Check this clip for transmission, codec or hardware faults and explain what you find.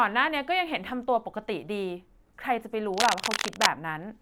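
One hardware fault is present in the speech. From 2.94 to 3.67 s, a dense, uneven scratching rasps over the speech at roughly its own loudness: cable scratch noise, likely from a worn cable or connector being moved, its contact resistance fluctuating rapidly.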